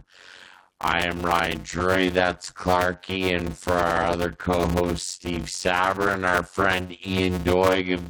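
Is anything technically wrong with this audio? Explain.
Yes. Block size mismatch (padded) runs through the whole speech clip. Each short block, which fits 256-sample writes, is zero-filled to a longer read size. That inserts a gap every block, causing a buzz near 91.9 Hz and speech slowed to 0.533 times normal speed at roughly normal pitch.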